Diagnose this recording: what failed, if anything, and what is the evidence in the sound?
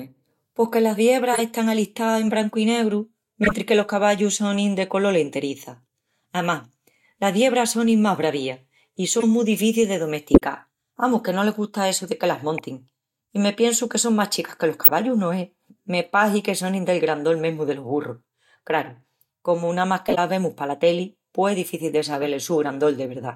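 Corrupt frame decoded at 1.33 s (after "pos que las"), 3.44, 9.15, 10.34, 12.58 (after "essu de que las"), 14.82, 20.08 and 22.21 s (after "pos es difici de"): brief chirps and noise bursts over the speech, each under about 0.1 s. Some are loud, and the 10.34 s burst also adds about 20 ms. This is a codec fault. Damaged compressed frames were decoded anyway, so misread gains and codes put energy at the wrong frequencies for the span of a few frames.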